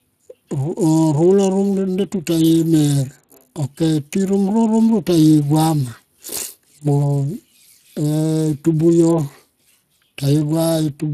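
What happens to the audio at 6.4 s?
Speex codec damage is present at 6.4 s, as it is across the whole recording. Speex is a CELP speech codec that models speech as a filter driven by a coded excitation. The plainly audible coarseness here points to a setting of around 22 kbps, where the excitation is coded only roughly. The speech sounds noisy and hoarse, and nothing remains above about 15.3 kHz.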